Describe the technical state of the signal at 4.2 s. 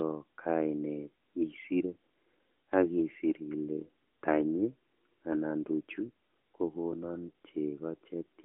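At 4.2 s the audio is intact, with nothing wrong beyond the AMR narrowband mobile codec path working as intended, which keeps the sound within a telephone band and leaves nothing above about 3.8 kHz.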